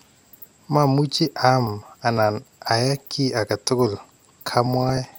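From 1.17 s to 4.66 s the speech carries periodic USB or driver dropouts: a tick about every 0.5 s. Each time, a background task stalls the audio path and roughly a millisecond of signal is skipped rather than filled with silence. The waveform jumps straight across the gap, leaving a click. The strict half-second spacing, audible only while sound is present, sets this apart from random crackle or a failing cable.

At 4.82 s to 4.98 s, a short burst of DAB burbling follows. Weak reception lets bit errors get past error correction into the MP2 stream, at a low rate of a few tenths of a percent. Over about 0.15 s, which fits a run of several corrupted frames, individual sub-bands pick up short blips of noise. Unlike a dropout, nothing goes missing. The sound stays continuous but is wrongly coloured band by band.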